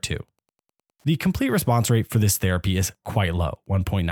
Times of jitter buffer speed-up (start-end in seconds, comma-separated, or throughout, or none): none